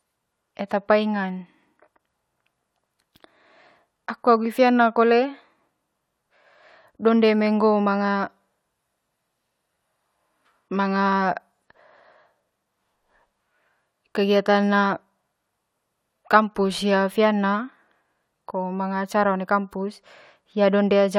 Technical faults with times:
none

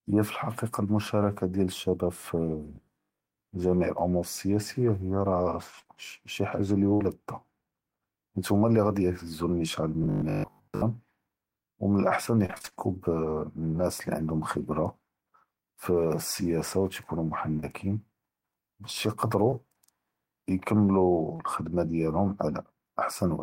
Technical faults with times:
2.76-3.20 robotic sound from repeated short buffers
5.79-7.02 repeated packet loss (robotic sound)
10.04-10.84 robotic sound from repeated short buffers
12.46-12.74 repeated packet loss (robotic sound)
17.57-17.64 short concealed packet loss
19.50-19.54 short concealed packet loss
21.36-21.40 short concealed packet loss

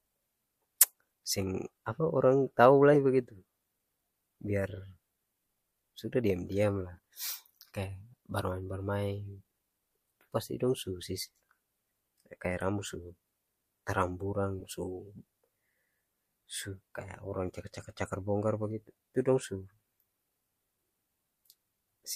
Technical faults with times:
2.93-2.97 corrupt frame decoded
14.60-14.64 corrupt frame decoded

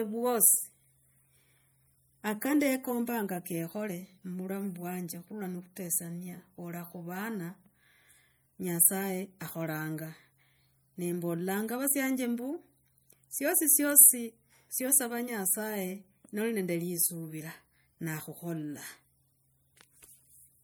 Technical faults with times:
0.00-20.64 MP3 compression

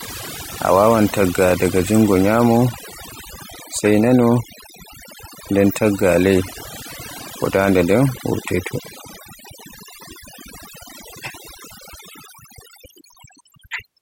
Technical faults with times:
0.00-14.01 overdone noise removal

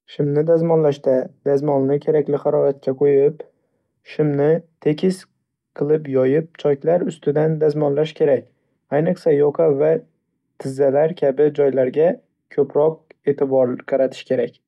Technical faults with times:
none

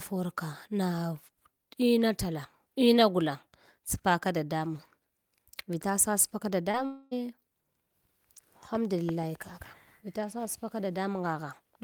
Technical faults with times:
6.71-6.75 short concealed packet loss
6.85-7.13 long network dropout

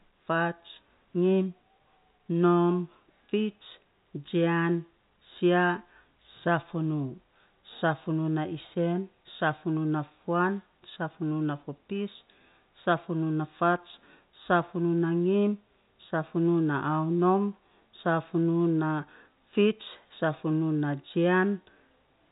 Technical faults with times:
none

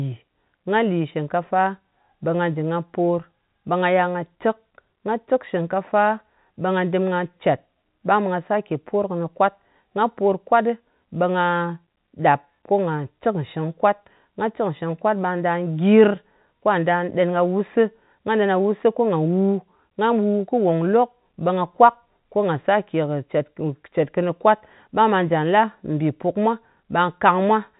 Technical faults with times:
none

